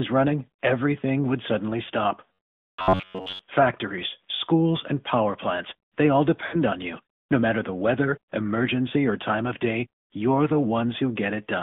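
Throughout, the speech sounds thin, buzzy and synthetic, confined to about 150 Hz to 3.6 kHz. That is the AMR narrowband mobile codec, and the audible damage fits AMR-NB at around 10.2 kbps.

From 2.33 to 3.42 s the speech turns into a rigid metallic buzz at 93.8 Hz that still roughly tracks the syllables. The likely cause is robotic sound from repeated short buffers: most of that stretch replays a segment of about 10.7 ms while fresh audio is skipped.

From 6.46 to 6.59 s the speech briefly smears and sags. These are lost AMR speech frames: 60 ms went missing, and the decoder filled the gap from its previous settings at falling gain.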